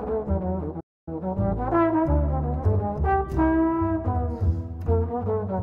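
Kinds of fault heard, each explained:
Playback stall: The sound stops abruptly in mid-flow at 0.80 s and the output stays silent until 1.08 s, a stall of 266 ms. This is not a natural pause. The audio is cut off mid-stream and then picks up again. The likely cause is the player running short of data or its processing thread being blocked, so nothing reached the output until it recovered.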